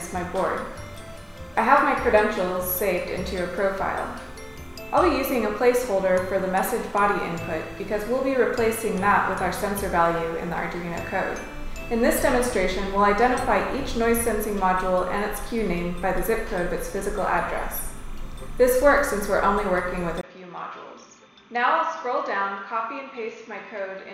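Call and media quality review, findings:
Timecode bleed, full clip: steady chirping warble around 1 and 2 kHz, roughly 30 dB under the signal. LTC at 30 frames/s leaking from an adjacent track or cable.

Input switched to a poorer device, 20.21 s to end: 20 ms gap, then nothing above 6.7 kHz, level down about 10 dB, new noise floor roughly 45 dB below signal. Likely a mid-recording switch to a narrower-band microphone or headset.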